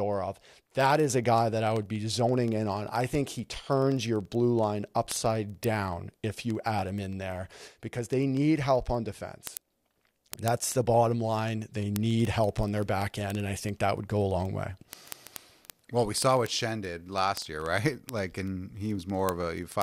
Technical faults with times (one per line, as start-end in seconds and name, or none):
0.14-19.82 word clock ticks